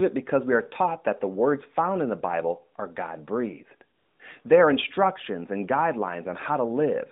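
From 3.98 to 4.20 s, about 220 ms, AMR comfort noise replaces the real background. The phone judged the line silent, stopped sending speech frames, and the receiver synthesised a smooth, steady hiss from a coarse level estimate. Unlike a dropout, the gap never goes dead, and the noise stays within the narrowband 200 Hz to 3.7 kHz line.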